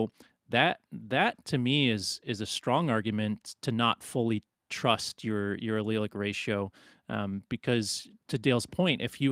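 Speech recording with no technical faults to report.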